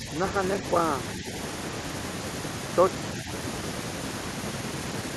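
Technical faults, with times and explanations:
0.00–0.06 s, 1.18–1.26 s, 3.23–3.28 s: speech suppressed in double talk. Brief, shallow dips of about 5 dB rather than full dropouts or clicks, likely from an echo canceller ducking during overlapping talk.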